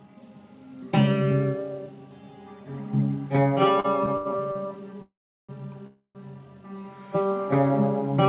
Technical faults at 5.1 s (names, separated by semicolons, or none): call audio freeze